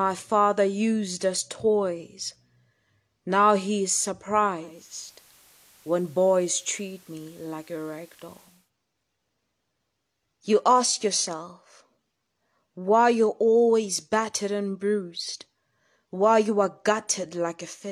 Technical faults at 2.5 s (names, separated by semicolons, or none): none